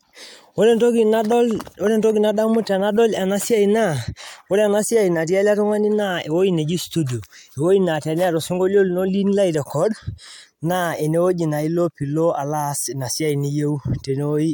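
Speech recording with no technical faults audible anywhere.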